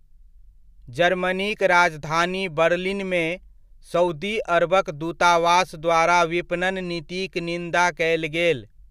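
No technical faults can be heard anywhere in the recording.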